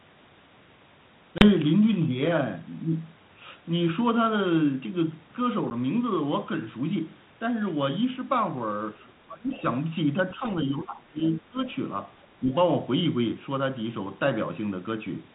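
Speech on a G.726 ADPCM telephone link, whose light codec noise stays in the background, shows packet loss on an ADPCM call at 1.38–1.5 s (30 ms missing, which fits about three lost packets) and at 5.7 s (10 ms). Each loss leaves a hard-edged silent gap, seen as a flat notch in the waveform and a clean vertical blank in the spectrogram. Afterwards the decoder's predictor and step size briefly disagree with the sender's, so the speech returns slightly distorted. Speech suppressed in double talk appears as dips in level at 8.99–9.06 s (about 5 dB), 9.27–9.62 s and 10.22–11.59 s (up to about 20 dB), and 12.39–12.51 s (about 10 dB). The likely cause is an echo canceller that could not tell the talker from loudspeaker echo and turned both down. In these stretches the waveform envelope sags. The other side's voice leaking through is a faint scrap at 12.22–12.26 s, about 35 dB below the speech, and is likely residual echo that the canceller failed to remove. 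It appears as a weak, separate trace in the spectrogram just before the last dip.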